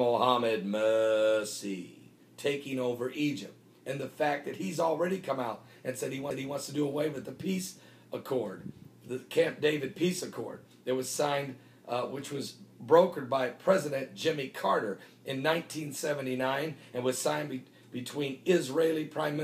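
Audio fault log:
6.30 s, CD skip: a tick-like mute lasting only a few milliseconds, then the audio continues from a different place, forward or back, because the laser jumped to another turn of the spiral. Unlike a plain dropout, the sound doesn't resume where it stopped.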